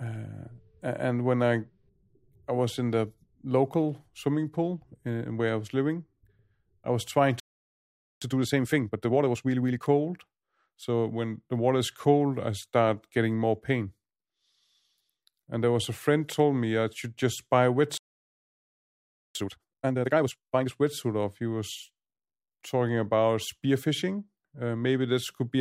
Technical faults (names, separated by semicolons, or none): playback stall; time-compressed catch-up